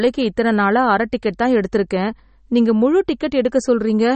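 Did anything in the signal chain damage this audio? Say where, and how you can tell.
Yes. The damage sits at the codec stage and runs through the whole speech clip. Nothing is present above 8.4 kHz, a hard treble ceiling rather than a gentle roll-off. The sound is plainly watery and swirly, and s sounds turn metallic. This is likely MP3 compression at a low bitrate, which fits around 32 kbps. Short of bits, the encoder cut the top band and dropped weak frequency lines that flicker on and off between frames.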